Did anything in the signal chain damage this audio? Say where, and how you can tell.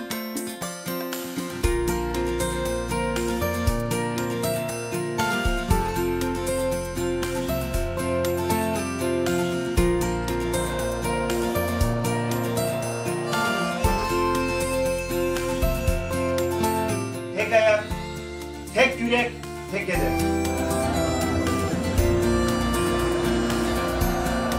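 No, nothing along the way seems to have done this recording any harm, so there's no damage to trace to any stage of the chain.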